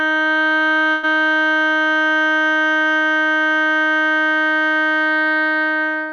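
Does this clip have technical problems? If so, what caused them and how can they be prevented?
Yes. A burst of packet loss hits the music from 0.91 to 1.05 s. The receiver filled about 115 ms by stretching the last sound and fading it, so the music turns into a sustained, dimming smear before resuming 120 ms further along, with that stretch missing. On a spectrogram, the band shows frozen horizontal streaks that fade, then an abrupt jump. The waveform shows a decaying envelope with no true silence. Forward error correction and a deeper jitter buffer would help prevent it.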